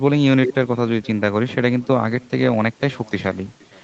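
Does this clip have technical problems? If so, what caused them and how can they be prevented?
Yes. Echo with no canceller runs throughout: the far end's loudspeaker feeds the call back into its microphone and nothing removes it, so the speech returns roughly half a second later as a faint, thin copy, about 27 dB below the original. Enabling acoustic echo cancellation at the far end, or having that listener use headphones, would prevent it. The call path's 8 kHz upper limit, consistent with a wideband Opus codec, can be heard alongside it.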